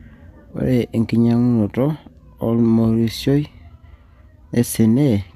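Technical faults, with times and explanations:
No technical faults can be heard in the speech signal, which stays steady and intact throughout.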